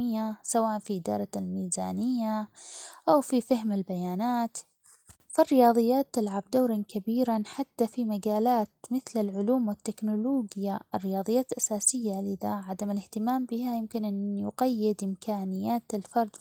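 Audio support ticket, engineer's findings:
No faults found in the speech recording. Nothing audible to escalate.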